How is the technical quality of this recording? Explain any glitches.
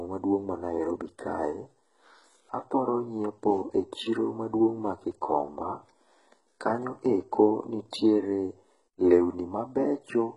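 Quality is fairly poor, with one problem running through the whole clip. The speech has heavy HE-AAC compression damage from start to finish: nothing above 11 kHz, and the treble is a rebuilt copy of lower bands rather than the real thing. That's likely HE-AAC's band replication working at a very low bitrate, around 12 kbps, so s sounds come out gritty, lispy and a bit metallic.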